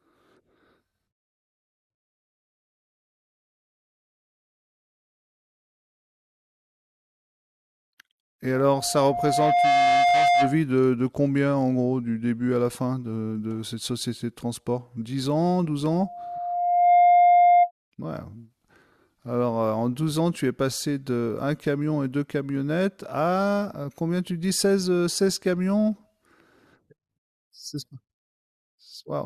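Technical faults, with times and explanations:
8.54–10.62 s and 15.90–17.71 s, loudspeaker feedback squeal: a 704 Hz tone swells over roughly a second, reaching about 5 dB above the speech the first time and about 10 dB the second. The microphone is re-amplifying its own loudspeaker, with loop gain above one at that frequency.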